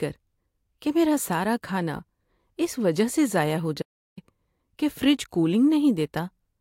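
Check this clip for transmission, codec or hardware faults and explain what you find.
One fault is present. From 3.82 s to 4.17 s there is an audio dropout to silence: the speech cuts off mid-flow and about 0.35 s is replaced by silence, with no room tone, likely because the input signal was lost while recording continued.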